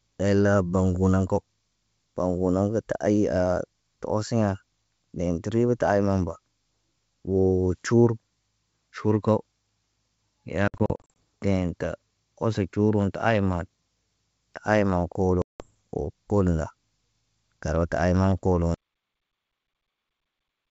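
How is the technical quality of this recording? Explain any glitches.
The recording has three clear faults: two bursts of packet loss and an abrupt cut-off near the end. It is wideband telephone speech with G.722 coding. It is clear up to about 7 kHz, with a faint hiss in the upper band.

The first packet loss on an ADPCM call runs from 10.68 to 11.11 s. About 240 ms of audio is missing, spread over roughly half a second in short holes. The longest hole is 60 ms. The second burst, from 15.42 to 15.71 s, loses about 180 ms. In both bursts, roughly ten packets are dropped. Each gap is filled with hard-edged silence. The decoder's predictor and step size lose track of the sender's. So the speech comes back with brief, slight distortion. It settles within some tens of milliseconds.

The cut-off end comes at 18.74 s. The final buffers were never written out, so the sound stops mid-sound. There is no natural decay. 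It falls straight to digital silence, which lasts for the last two seconds of the file.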